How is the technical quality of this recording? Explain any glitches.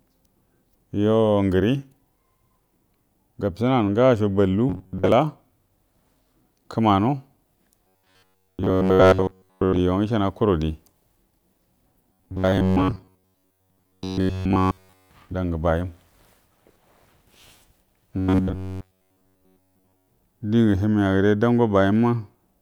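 The recording has a recurring robotic sound from repeated short buffers, at 4.70–5.12 s, 7.87–9.81 s, 12.13–15.10 s and 18.18–20.08 s. The speech turns into a rigid, metallic buzz pinned at 93.8 Hz that still roughly tracks the words. The likely cause is audio arriving too seldom, with the player looping the last 10.7 ms or so. Most of the real audio gets skipped, and in the last stretch almost none of it comes through.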